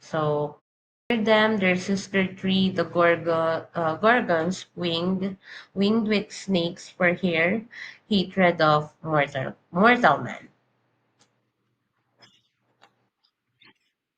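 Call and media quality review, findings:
Clipped start after a pause, 0.90–1.10 s: after a 0.37 s gap, 203 ms of onset gone, so "them their sister tree" bursts in mid-sound. Output device dozing through the silence, slow to wake and lock again.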